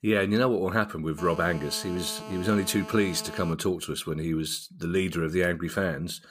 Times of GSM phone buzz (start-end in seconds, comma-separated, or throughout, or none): 1.18-3.53